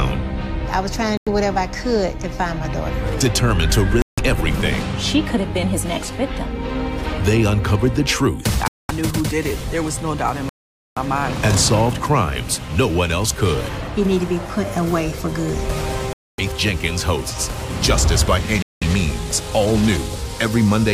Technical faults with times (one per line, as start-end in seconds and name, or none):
1.17-1.28 Bluetooth stall
4.02-4.20 Bluetooth stall
8.68-8.91 Bluetooth stall
10.49-10.98 Bluetooth stall
16.13-16.40 Bluetooth stall
18.62-18.83 Bluetooth stall